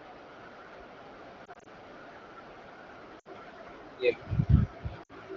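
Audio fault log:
1.45–1.68 s, lost AMR speech frames: a scatter of short dips and warbles spread over about 200 ms, none longer than 20 ms, which fits isolated single frames failing their checksum. For each one the decoder repeats the last good pitch and spectral shape at lower gain, so the sound wobbles rather than breaking. A network dropout would instead leave hard gaps or clicks.
3.19–3.28 s, lost AMR speech frames: about 60 ms of consecutive loss. The held pitch and vocal tract settings smear briefly and decay quickly toward quiet, as wideband concealment does, and the sound comes back weak or rough for a moment. The decay is a smooth fade, not the abrupt cut of a muted gap.
5.03–5.12 s, lost AMR speech frames: a similar run of about 60 ms, with the same quick fade toward quiet and the same weak or rough return, within otherwise clear 12.65 kbit/s wideband speech.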